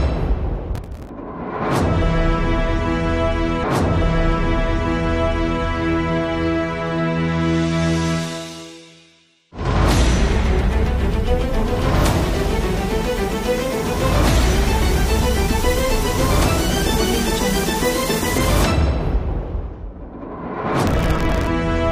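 A gritty burst of crackle tears across the audio from 0.75 to 1.09 s, and a longer, denser one returns from 20.87 to 21.47 s near the end. Both are processor overload crackle. The system couldn't finish its audio buffers on time, and the pattern suggests very short ones of a few milliseconds each. Dozens of deadlines were missed in a row in the first burst and roughly twice as many in the second. Each missed buffer was skipped outright, leaving a hard-edged hole, and those rapid-fire holes merge into the tearing texture. Between 3.62 and 5.62 s there is a small blip, and the preceding stretch plays again, adding about 2.0 s to the running time. This is a stream segment repeated: the player fetched or queued the same segment twice, so it jumped back and replayed it, with the blip marking the seam.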